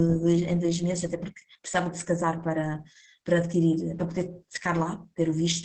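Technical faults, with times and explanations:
Throughout, Opus voice compression: the speech sounds muffled above about 8 kHz, hoarse and slightly robotic, which fits Opus in SILK wideband mode at roughly 10 kbps. The linear-prediction coder keeps the vocal-tract shape but quantises the excitation coarsely, roughening the voice.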